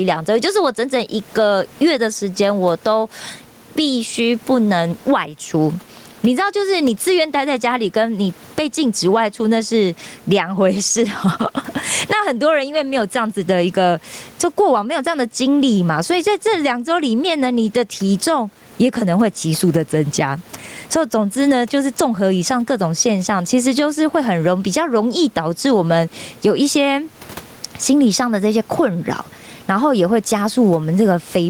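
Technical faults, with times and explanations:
Throughout, gain pumping: the room noise sits about 38 dB below the speech, the gain swings around 15 dB, and the dynamics sound squashed. Likely cause: input gain set far too high, with a fast limiter clamping every peak.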